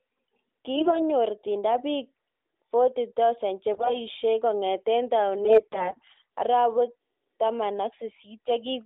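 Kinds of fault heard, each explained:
AMR bit errors: Flipped low-priority bits in the codec's frames misplace its pulses and skew pitch and gain. Three bursts turn hoarse and gargly, the shortest harshest.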